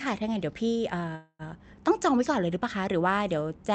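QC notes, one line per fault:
1.15–1.42 s, call audio freeze: packets were likely held up in transit and the jitter buffer ran dry, so the receiver extended the last sound as a fading buzz for about 240 ms, then 40 ms of silence. The speech resumes where it stopped, nothing lost, but everything after arrives about 240 ms later, heard through a call codec band-limited near 8 kHz.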